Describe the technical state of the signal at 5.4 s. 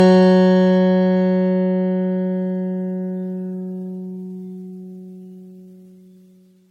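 At 5.4 s the music carries generation loss across the whole clip: swirly, hollow, smeared attacks with nothing above 12.3 kHz, likely from around ten MP3 passes near 60 kbit/s.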